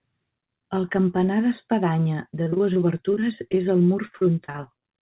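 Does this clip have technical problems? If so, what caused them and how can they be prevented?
Yes: from 2.44 to 4.82 s there's repeated packet loss, with around two dozen dropouts up to 41 ms each patched by stretching the last sound, giving choppy, robotic speech. A steadier network or a larger jitter buffer would prevent it.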